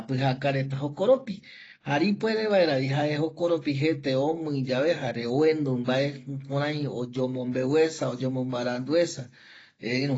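From start to finish the speech carries AAC compression damage, likely from AAC-LC at a low bitrate, which fits roughly 24 kbps. Nothing sounds above 7.6 kHz. Unlike a clean low-pass filter, plainly audible smearing and watery artefacts cling to what remains.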